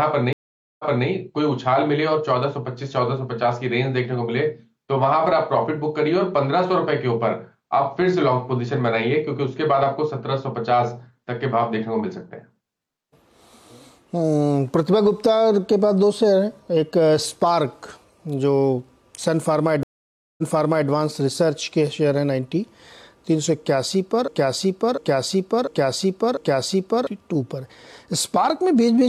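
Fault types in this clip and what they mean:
Stream reconnect: The connection dropped and the player restarted its decoder mid-stream. At 0.33 s there's about 0.46 s of silence, then the sound picks up 0.28 s earlier than where it stopped. At 19.83 s, about 0.55 s of silence, then it jumps back 0.51 s.
Broken-record loop: From 24.28 to 27.07 s, a 0.70 s fragment plays four times back to back, exactly the same each time. The likely cause is a stall that kept feeding out the last chunk it held, so whatever should have played there is gone.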